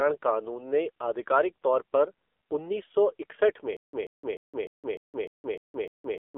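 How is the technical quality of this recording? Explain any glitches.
The quality is poor: the whole recording has heavy mobile-codec damage, and the final stretch breaks into a repeating stutter.

AMR narrowband mobile codec, throughout: The speech sounds buzzy and synthetic, the way a low-rate vocal-tract model rebuilds it. The heaviness points to a low mode, around 6.7 kbps. Nothing passes above 3.5 kHz, so a spectrogram shows a hard ceiling with an empty upper band.

Stutter with silent gaps, from 3.77 s to the end: Right after "सौ इकसठ में", a 135 ms burst repeats eight times, each followed by about 167 ms of digital silence, every 0.30 s. The likely cause is a stalled stream replaying its last fragment. The waveform shows identical blocks separated by flat lines.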